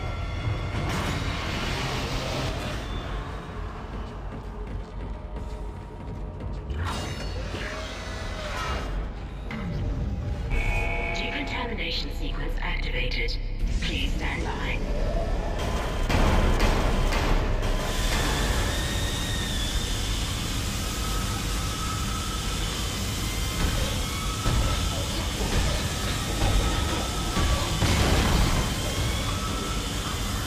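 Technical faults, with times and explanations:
No technical faults are audible anywhere in this clip.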